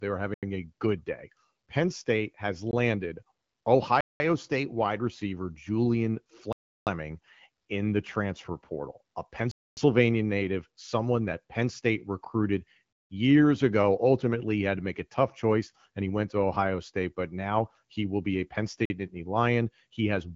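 The playback chain likely failed repeatedly to fill its output buffer in time, and each missed block went out as zeros, a block of digital silence. These fall at 0.34 s (85 ms), 2.71 s (19 ms), 4.01 s (194 ms), 6.53 s (341 ms), 9.51 s (256 ms), 12.93 s (171 ms) and 18.85 s (47 ms). Several lengths fit 4096-, 8192- and 16384-sample buffers. With no fade at either edge, the sound cuts out and back abruptly, and each gap is a short hole in the speech.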